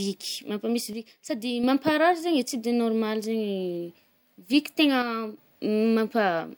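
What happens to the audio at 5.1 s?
At 5.1 s the speech drops abruptly in level by about 6 dB and stays lower from 5.02 s to 5.37 s, then returns to its normal level just as suddenly. The step has the signature of one channel dropping out: with one side of the stereo pair likely lost for that 0.35 s stretch, the mono sum carries only half of the material common to both channels, and anything present only in the missing side vanishes.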